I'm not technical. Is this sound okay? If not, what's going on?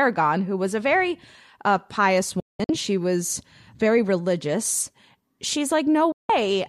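No. The speech cuts out twice: around 2.40 to 2.70 s it drops into a few brief silent gaps, and again from 6.12 to 6.30 s. This is a digital broadcast dropout: the receiver lost the signal and went quiet until clean data returned, so those moments are gone.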